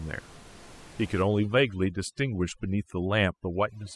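From 1.22 s to the end, overdone noise removal takes hold. Up to that point the room noise sits steadily about 23 dB below the speech. Then a noise reduction stage, set far too aggressively, starts switching off individual frequency bands whenever they come close to its noise estimate. The background drops and breaks up into twinkling specks, and the quieter parts of the speech are removed along with it. A plain noise gate would instead mute the whole signal at once.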